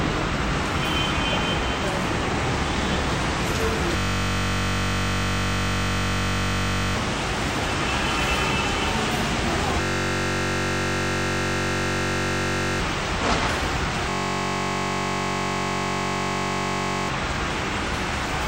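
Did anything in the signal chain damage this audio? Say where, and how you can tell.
Yes, there's a system hang loop at the driver/buffer stage, three times: 3.97 to 6.96 s, 9.81 to 12.80 s and 14.10 to 17.09 s. Each time the audio collapses into a steady buzz at about 47 Hz, a 21.33 ms slice repeating exactly, which fits a 1024-sample buffer. The host froze while the hardware kept replaying its ring buffer, so about three seconds of real audio is gone at each spot.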